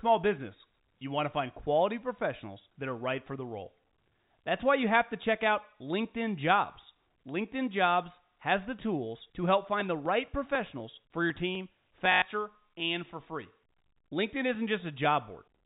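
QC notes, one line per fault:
8.27 s, packet loss with last packet repeated: a single small blip, a brief hitch in the speech. About 20 ms went missing, which fits one lost 20 ms packet, and the receiver filled the gap by replaying the previous one.
12.12 to 12.22 s, packet loss with last packet repeated: a short robotic stutter with a buzzy edge lasting 100 ms. The sound points to about five consecutive 20 ms packets lost and the last good one looped, buzzing at around 50 Hz. The telephone band-limiting to 4 kHz, from G.711 coding, is heard around it.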